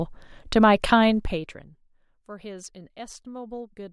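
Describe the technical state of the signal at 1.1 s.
At 1.1 s you're right at the start of some zipper noise, running from about 1.10 to 1.79 s. The level drops by roughly 20 dB in unsmoothed steps, around a hundred a second, and each step clicks, so a fine zipping buzz rides on the speech while it fades.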